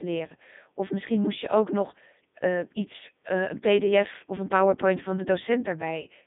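Codec 2 vocoder damage runs through the whole of the speech. Instead of carrying the waveform, the coder keeps only pitch, voicing, energy and a coarse spectral envelope, and the decoder rebuilds the voice from a bank of sine waves. The result is heavily robotic and buzzy, consistent with its top 3.2 kbit/s mode. The sound sits in a narrow line band from 200 Hz to 3.6 kHz, with nothing above 3.7 kHz.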